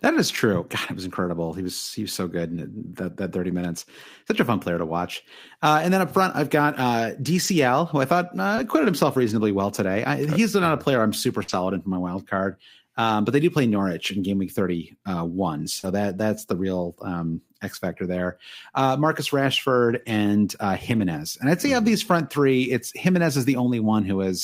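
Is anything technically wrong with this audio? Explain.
Yes, this speech has packet-loss damage of three kinds.

Lost packets rebuilt from error correction occur at 7.43–7.53 s (after "front I've got uh", before "who I thought uh"), 8.57 s, 11.48–11.54 s (after "a player I'm super", before "in for my wild"), 13.71 s, 15.83 s, 19.89–20.11 s and 20.91–21.01 s. Packets went missing, and the decoder played the low-bitrate copies carried in the following packets. There's no gap, but those stretches sound rougher and noisier.

Short concealed packet loss appears at 8.55–8.59 s and 15.79–15.85 s, just before "that that's the real". About 20 ms and 40 ms of audio never arrived. The receiver extended the preceding sound to fill each hole, leaving a brief smear or wobble.

A burst of packet loss hits at 11.43–11.50 s. Roughly 40 ms went missing, and the receiver continued the previous sound for about 48 ms while fading it down. 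The result is a held, dimming buzz or hiss before the audio resumes, with that slice lost.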